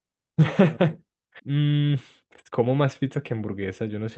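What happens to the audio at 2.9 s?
At 2.9 s the speech is inside a jitter buffer speed-up running from 1.49 to 4.04 s. The receiver repeatedly cuts one or a few pitch periods to drain excess buffered audio, about 0.3 s in total, so the speech plays about 12% faster at unchanged pitch and sounds hurried. The spectrogram shows compressed syllable spacing with harmonics at their usual heights.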